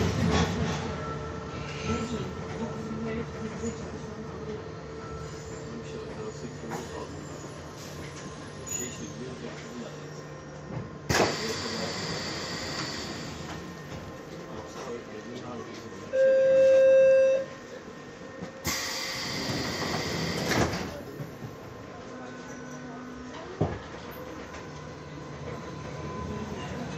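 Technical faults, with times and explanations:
No technical faults are audible anywhere in the recording.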